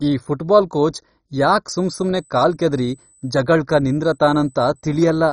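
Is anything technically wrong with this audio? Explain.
Yes, three faults are audible in this speech clip.

Throughout, channel delay (comb filtering): one channel lags by a fraction of a millisecond, so mono summing cancels evenly spaced frequencies. The sound is hollow and phasey, with fixed notches from around 3 kHz upward that show as dark horizontal stripes on a spectrogram.

Also throughout, heavy MP2 compression is the likely cause of the dull, gurgling, granular texture. Starved sub-bands switch off, leaving nothing above 10.4 kHz and flickering upper bands that fit a very low bitrate.

From 1.71 s, just after "ಈ ಫುಟ್ಬಾಲ್ ಕೋಚ್ ಯಾಕ್", to the end, USB whine sits at a fixed 8 kHz, about 20 dB below the speech. This is bus microframe current leaking through power or ground, visible as a steady horizontal spectrogram line.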